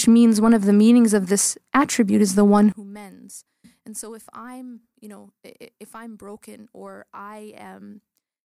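From 2.72 s to the end, the audio drops by about 22 dB, leaving only a faint residue of what was there before. The likely cause is one channel inverted: one side of the stereo pair carries reversed polarity, so when the two are summed to mono, everything common to both cancels. Centred material and low end largely disappear, and only the difference between the channels remains audible.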